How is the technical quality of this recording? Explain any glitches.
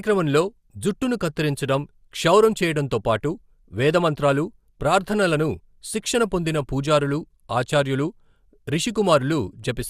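The recording has one glitch, near the end. DAB burbling occurs from 9.05 to 9.10 s. Weak reception let bit errors, under a tenth of a percent, corrupt the audio data. Two frames are hit, giving brief noise blips in single bands.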